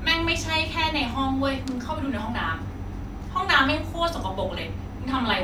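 No technical faults are audible.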